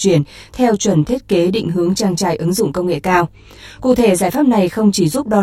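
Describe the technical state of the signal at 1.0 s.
At 1.0 s, as throughout the clip, the speech shows channel delay (comb filtering): one channel trails the other by around 20 ms, and summing them to mono cancels shared content at evenly spaced notches from around 30 Hz upward, giving a rough, slightly doubled sound.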